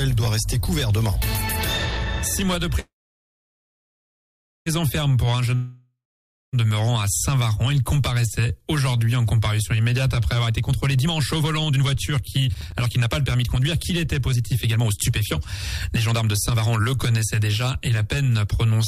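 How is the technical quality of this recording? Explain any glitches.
The recording has several transport and playback glitches: two interruptions early on, two stretches where the audio runs fast, and a short crackle burst.

From 2.79 to 4.68 s there is a call audio freeze. The last sound carries on briefly as a fading buzz, then about 1.75 s of near silence. When playback resumes it continues from where it stopped, with nothing lost. The likely cause is delayed packets draining the jitter buffer, which added roughly 1.87 s of delay.

From 5.55 to 6.55 s a long network dropout occurs. A short fading tail gives way to about half a second of silence, and the audio returns further along. Roughly 0.98 s of content is skipped, most likely because packets never arrived and the receiver could only fill the gap.

A jitter buffer speed-up runs from 10.40 to 15.23 s at 127% speed and again from 15.88 to 18.72 s at 118%. 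The pitch stays the same but the pace sounds hurried. The receiver is trimming pitch-period slices to shed excess buffered delay, about 1.5 s in the first stretch and about half a second in the second.

From 12.55 to 12.79 s there is processor overload crackle, a gritty tearing on top of the sped-up audio. A handful of buffer deadlines were missed in quick succession, each leaving a hard-edged silent gap. The gap length fits a buffer of around 5 ms.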